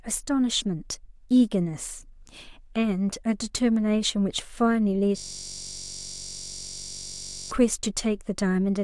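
A system hang loop runs from 5.18 s to 7.51 s. The playback system stalled while the sound hardware kept replaying its ring buffer, so a single 21.33 ms slice of the speech repeats exactly, over a hundred times. That loop length fits a 512-sample buffer. Because the repeated piece is so short, it no longer sounds like speech. Instead it forms a steady, fixed buzz at about 46.9 Hz, the rate at which the loop repeats, lasting until the audio resumes.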